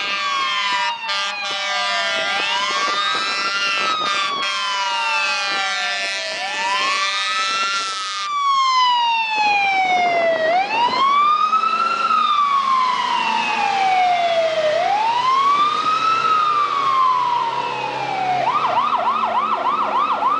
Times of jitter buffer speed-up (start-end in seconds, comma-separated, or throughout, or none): none